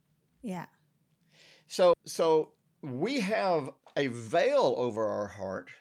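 This is a speech clip with two timing faults. The first is a skip ahead at 1.93 to 1.95 s, just before "so we have". Roughly a second of audio is gone. Nothing fills the hole, so the two sides join almost directly and the speech lurches forward. Audio was dropped in transit or discarded by an overflowing jitter buffer while later audio was already queued. The delay shrinks by about a second as a result. The second fault is a jitter buffer speed-up from 3.77 to 5.51 s, after "so we have". The speech runs at 112% speed while the pitch stays the same, so it sounds hurried. The buffer had built up more audio than its target. To pull the delay back down, the receiver cut out short pieces of one or a few pitch periods, over and over. In total it removed roughly a fifth of a second.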